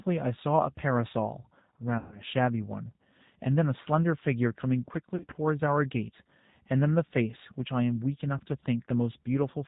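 Speech coded with G.729 throughout, at 8 kbit/s, plainly audible as a rough, slightly synthetic tone; a spectrogram shows nothing above 4 kHz. VoIP packet loss concealed by the speech codec occurs at 1.98–2.22 s (about 140 ms lost), 5.16–5.33 s (100 ms scattered over 160 ms) and 8.38–8.41 s. Each gap is stretched into a buzzy tone or coloured noise that fades, showing as a decaying waveform envelope, consistent with 20 ms packets.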